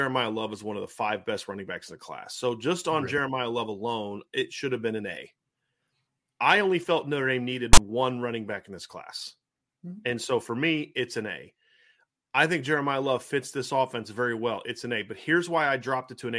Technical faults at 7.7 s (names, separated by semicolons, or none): file tags played as audio